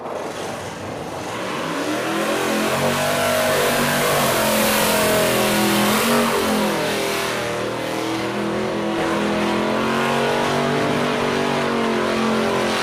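From the very start until about 8.98 s there's a channel delay (doubling) going on. One channel is running roughly 42.7 ms behind the other, which fits a 2048-sample buffer at 48 kHz. Once both get summed to mono, that late copy doesn't blend in. You hear everything twice, a tight slap right behind the original at the same level, so the sound gets a thick, stuttery doubled edge until it snaps back to single at 8.98 s.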